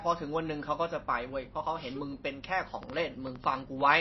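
Heavy lossy encoding, likely MP3 compression at a very low bitrate (the damage fits something around 24 kbps), runs through the whole speech clip. Starved of bits, the encoder has cut everything above 5.8 kHz, so sibilants lose their edge and the speech sounds dull and boxed-in. Weak frequency lines drop in and out from frame to frame, giving a plainly audible watery, swirling texture and softened, smeared consonant attacks.

From 2.83 s to 3.82 s, something injects a repeated pulse into the signal, likely interference or a faulty connection. This train of clicks arrives at about 8.2 per second on an uneven beat, roughly ten in all, with peaks rising a few decibels above the speech itself. The clicks share much the same shape and come through as a rapid, irregular ticking laid over the voice.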